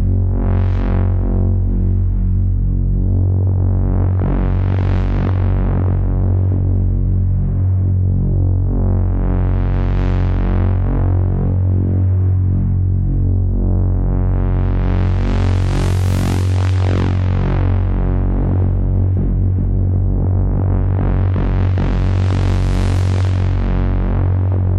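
Everyday sounds, with no audible technical fault anywhere.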